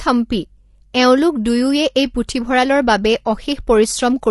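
Speech throughout carries plainly audible low-delay AAC compression: the voice sounds rough and grainy, with noise between harmonics, a likely sign of roughly 32 kbps AAC-ELD.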